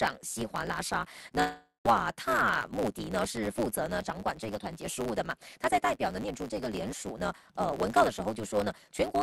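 From the start and through the whole clip there is a block size mismatch (truncated). A steady buzz at about 109 Hz sits under the sound, and everything plays about 1.16 times too fast while keeping close to its normal pitch. This pattern fits a 512-sample write block read by a stage taking smaller blocks: the tail of each block is discarded, so the sound skips ahead at the block rate.

From 1.41 s to 1.87 s the audio breaks up, most likely from a long network dropout. The last sound is stretched into a fading buzz or hiss lasting about half a second, followed by roughly 110 ms of silence. When the audio resumes, about 0.52 s of material is missing, so it picks up further along rather than where it stopped.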